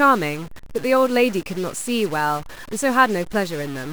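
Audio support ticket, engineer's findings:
Harsh, buzzy distortion riding on the speech for the full clip, with pauses filled by noise. Likely a stuck bit in the converter or a data line, offsetting about half the samples by a fixed step of roughly -35 dBFS and flipping on small values.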